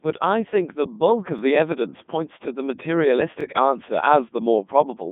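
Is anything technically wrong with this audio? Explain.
Yes, there are two problems.

The whole clip has been through a Codec 2 vocoder. The speech comes out robotic and buzzy, with nothing above 3.8 kHz and a narrow line band of about 150 Hz to 3.6 kHz. The damage is heavy, which fits Codec 2's top 3.2 kbit/s mode. The decoder rebuilds the voice from sine waves using only pitch, voicing, energy and envelope, so the original waveform never survives.

There are also overlapping chunks, at 1.39–1.41 s and again at 3.41–3.43 s. The audio was handled in 2-second blocks, and each one starts slightly before the previous one ends. About 20 ms replays at each join, which you hear as a small stutter or click.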